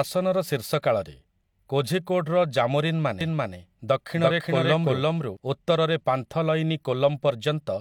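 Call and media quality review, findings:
Doubled audio track, 3.21 to 5.37 s, starting just before "ଉତ୍ତରରେ ପାନ୍ଥଲୟିନୀ". The speech is heard twice, the second full-band copy about 0.3 s behind at roughly equal level, dry and cut in and out abruptly. Likely a second, slower capture path mixed in.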